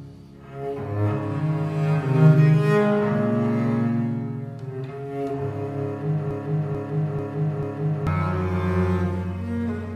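A short piece of audio, about 0.44 s long, starts repeating exactly and back to back at 6.31 s, cycling four times until 8.07 s, a broken-record loop. Whatever should have played in that span is missing, likely because the player, encoder or stream stalled and kept resending its last buffered fragment.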